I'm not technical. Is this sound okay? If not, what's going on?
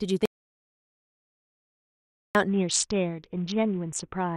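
No. From 0.26 s to 2.35 s the speech cuts out into dead silence, with not even background hiss, and about 2.1 seconds of talking is lost. This audio dropout to silence likely came from the microphone or its connection failing while recording continued.

From 2.48 s to the end, the voice turns dull and muffled, with a gritty, crunchy roughness. This is a Bluetooth SBC bit pool drop: a crowded wireless link forced the phone to squeeze the sound into far less data, and it doesn't recover before the clip ends.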